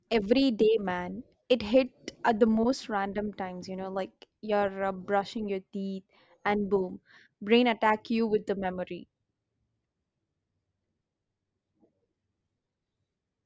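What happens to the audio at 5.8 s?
Nothing happens at 5.8 s: the speech runs through that moment intact, with no dropout, click or other fault.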